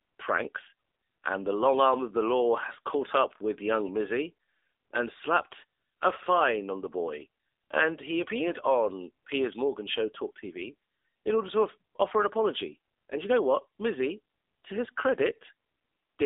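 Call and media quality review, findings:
Buzzy, synthetic, muffled speech throughout; nothing above 3.7 kHz, band 300 Hz to 3.7 kHz. AMR narrowband mobile codec, heavy damage, consistent with a low mode around 6.7 kbps.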